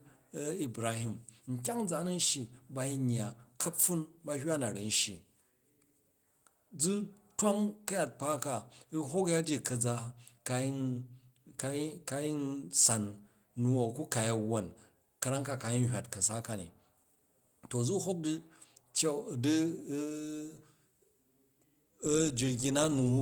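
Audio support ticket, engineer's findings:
No faults found on listening; nothing to escalate.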